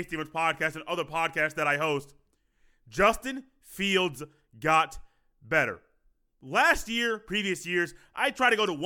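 Nothing in the speech recording points to a technical fault, with no dropouts, glitches, distortion or level problems anywhere in the signal.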